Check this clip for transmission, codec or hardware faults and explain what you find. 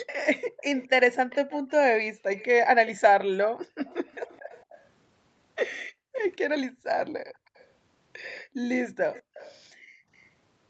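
Two faults are present: a leaking echo and background gating by an echo canceller.

Echo leak appears five times: 0.06 to 2.88 s, 3.88 to 4.87 s, 6.14 to 6.2 s, 7.26 to 7.66 s and 9.14 to 10.29 s. A faint delayed copy of the speech trails the original by about 219 ms. It sits roughly 20 to 35 dB below the speech, loudest at the start. The likely cause is a far-end loudspeaker feeding its microphone, with the echo canceller failing to remove it all.

Background gated by the echo canceller occurs between 5.85 and 10.09 s. The room sound dips in short bursts that add up to about one second. At its deepest, the drop reaches about 40 dB. The canceller pulled the microphone down hard while the loudspeaker played. It then released, and the ambience came back. The treble stops near 8 kHz, as expected on this call path.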